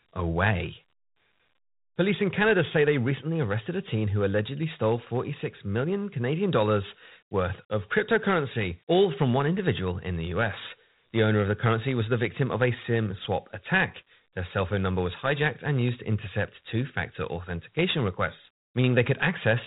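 Throughout the speech, Dialogic VOX ADPCM coding leaves nothing above 3.8 kHz and a plainly audible gritty hiss that tracks the speech. That fits 4-bit steps at 8,000 samples a second (32 kbps). Unlike a clean band limit, the grain rides on the signal itself.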